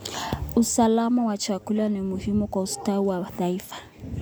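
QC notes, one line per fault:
No technical faults can be heard anywhere in the signal.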